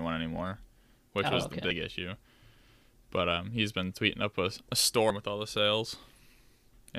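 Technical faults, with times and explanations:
1.70 s and 5.10 s, compressed frames skipped: the speech jumps ahead by roughly 30 ms and then about 50 ms, which fits one and then two lost frames of around 26 ms each. The overlapping neighbouring frames turn each join into a short smeared blip, not a sharp click.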